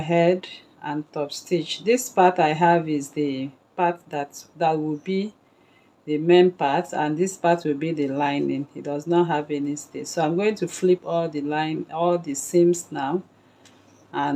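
No technical faults can be heard anywhere in the audio.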